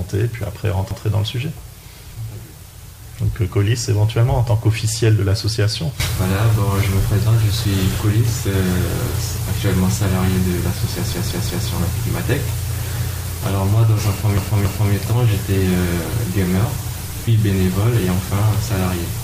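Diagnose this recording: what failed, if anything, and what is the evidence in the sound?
The failure is at the codec or storage stage: runs of compressed frames were written or delivered more than once, and the decoder plays each copy. These repeated frames sound like a stutter. At 0.91 to 1.0 s, a 93 ms block plays twice, which fits a single repeated frame. At 11.12 to 11.68 s, a 186 ms block plays four times. At 14.38 to 14.93 s, a 279 ms block plays three times. Each of the later two adds about 0.56 s to the running time.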